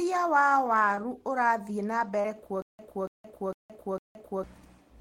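At 0.95 to 0.99 s and again at 2.21 to 2.26 s, there is short concealed packet loss. About 20 ms, then 40 ms, of speech arrived too late to decode. The receiver extended the preceding sound to cover each hole. Each one is heard as a brief smear or wobble.

From 2.62 to 4.44 s there is a stutter with silent gaps. A 285 ms burst plays four times, with 169 ms of digital silence after each, repeating every 454 ms. The speech meant for that stretch is lost. The likely cause is a stalled stream replaying its last fragment.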